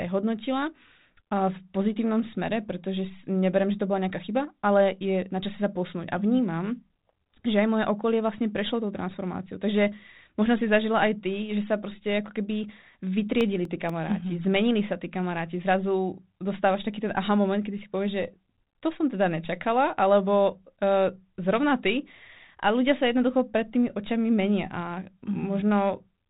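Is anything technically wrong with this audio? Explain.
Yes. CD scratch ticks appear from 13.41 to 14.14 s as four sharp clicks, the longest lasting about 2 ms. A blemish on the disc passes under the laser once per revolution and corrupts more data than error correction can rebuild, so the player interpolates or mutes those samples. That repeats about five times a second. The speech also sounds band-limited below 3.8 kHz with a faint ADPCM graininess, which points to a 32 kbit/s G.726 telephone path.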